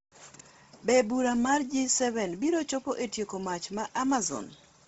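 Across the whole speech clip, the upper band is stripped away, with nothing audible above about 7.7 kHz, and the treble that survives has a breathy, grainy texture. This is likely Bluetooth LC3 compression working hard at a low bitrate. At that rate the codec zeroes large parts of the high spectrum and fills the gaps with synthetic noise. The heavy damage fits roughly 24 kbps with short 7.5 ms frames.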